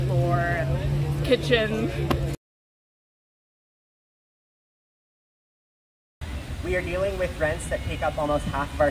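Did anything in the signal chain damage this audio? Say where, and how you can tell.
No, nothing in the signal chain audibly damaged it.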